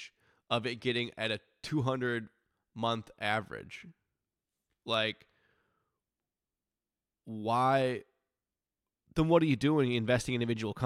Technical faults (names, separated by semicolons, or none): none